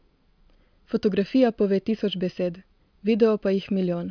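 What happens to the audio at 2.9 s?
Nothing goes wrong at 2.9 s: the speech carries on intact through that moment, with no dropout, click, distortion or other fault to be heard.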